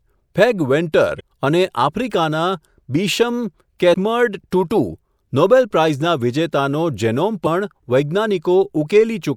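A speech recording marred by three brief glitches that break into the sound, from 1.17 to 1.21 s, at 3.93 s, and from 7.43 to 7.47 s, each lasting only about 20 to 40 ms. These bursts come from damaged data in a compressed stream: bytes in the encoded file were corrupted, so the decoder misread those frames, lost sync, and produced garbage until it locked onto the next valid frame header.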